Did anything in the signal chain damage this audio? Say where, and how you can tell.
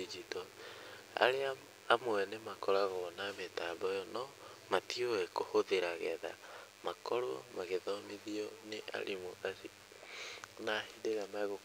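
Yes. A DECT cordless phone buzz damaged the analogue wiring stage for the whole clip. A thin, steady buzz at 100 Hz, rich in harmonics, sits roughly 25 dB under the speech. A nearby DECT handset or base pulses every 10 ms, and the input circuitry rectifies those bursts into audio.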